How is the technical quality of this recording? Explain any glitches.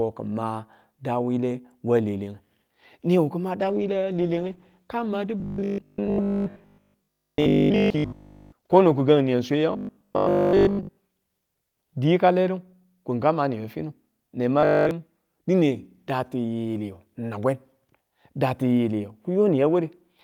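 The recording has two clear problems, and both come from the transmission path. There is a long stretch of degraded quality and several bursts of mechanical buzzing.

From 3.6 to 13.15 s there is a call bitrate drop. The network's bandwidth estimate fell, and the encoder had to spend far fewer bits. Coarser coding blurs detail and trims the top end. The result fits a fall from about 48 kbps to about 14 kbps, with the floor held for roughly 5.2 s. During that time the speech sounds rough, watery and muffled, until quality returns.

Robotic sound from repeated short buffers occurs at 5.40 to 8.52 s, 9.73 to 11.01 s and 14.61 to 14.91 s. The buzz sits at 50 Hz. That points to a 20 ms chunk being replayed whenever fresh audio arrived late. The likely cause is the playback side covering gaps this way while real audio is skipped. In the first two bursts most of the audio is replaced. The last burst is entirely repeats. 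The speech becomes a rigid, metallic drone that only loosely tracks the words.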